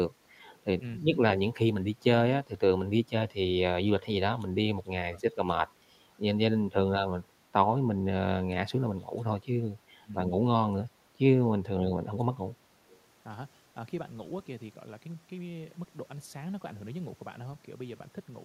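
Right at the start, from 0.44 to 0.58 s, there's a faint echo leak: a ghostly copy of the speech trailing the original by 282 ms, sitting very low, something like 35 dB under the voice. It's most likely the far end's loudspeaker bleeding into its mic with the echo canceller not quite scrubbing it out. The same faint, delayed scrap comes back at 12.88 to 13.01 s, with the same 282 ms delay.

In between, the speech keeps getting ducked. At 0.97 to 1.1 s, 5.01 to 5.21 s, 6.52 to 6.88 s, 9.99 to 10.14 s and 11.59 to 11.87 s the voice drops away sharply, roughly 25 to 30 dB at its deepest, for a fraction of a second each time. That points to speech suppressed in double talk. With both sides talking at once, the echo canceller couldn't tell the talker from the returning echo and pulled the level down on both.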